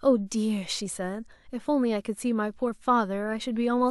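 No technical faults can be heard anywhere in the speech. There is nothing here to place on a timeline.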